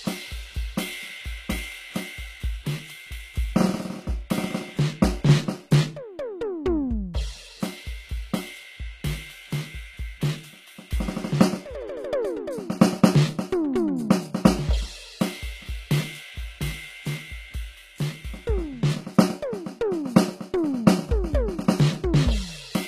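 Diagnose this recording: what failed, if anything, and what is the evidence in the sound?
At the converter, the sampling clock is being shaken periodically at around 100 Hz, so periodic clock jitter runs through the whole music clip. Each tone gains sidebands spaced about 100 Hz away, strongest on the upper partials, adding a rough, metallic edge that drops out whenever the music does.

The treble throughout sounds gritty and metallic, with harmonics that fail to line up above the midrange and nothing at all above 14.9 kHz. The likely cause is HE-AAC compression at a low rate, one that fits about 20 kbps, rebuilding the highs by copying lower bands upward.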